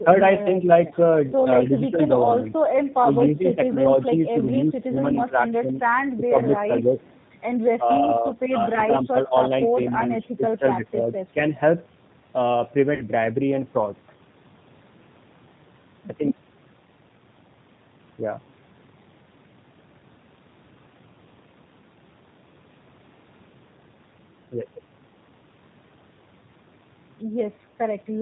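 G.729 coding runs through the whole speech clip at 8 kbit/s. The voice is rebuilt from a vocal tract filter, a pitch predictor and a few pulses per frame, so nothing above 4 kHz survives, and the damage is plainly audible as a rough, synthetic edge. VoIP packet loss concealed by the speech codec appears at 0.87 to 0.93 s and again at 12.95 to 13.04 s. About 40 ms of audio went missing each time, which fits two lost packets. The decoder stretched its last pitch and filter state into a fading fill, and the sound stays weakened just after each gap. Speech suppressed in double talk is the likely cause of repeated dips between 1.66 and 11.52 s. These dips add up to about 3 s and go as deep as roughly 10 dB, as the echo canceller turned the talker down while the far side was also talking. An echo leak is likely behind a faint delayed copy of the voice at 6.98 to 7.18 s and 9.04 to 10.28 s. It trails the original by 226 ms at around 35 dB below the speech, residue from a loudspeaker that the canceller failed to remove.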